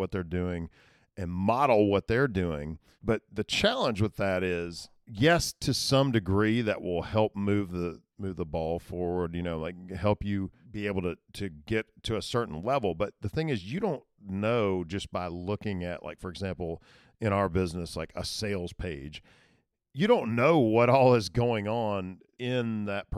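No technical faults can be heard anywhere in the recording, and the signal stays continuous and stable throughout.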